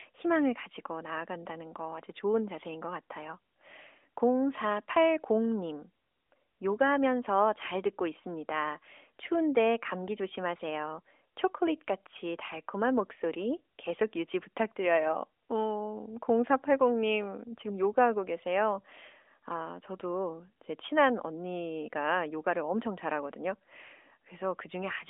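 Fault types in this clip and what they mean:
No faults can be heard.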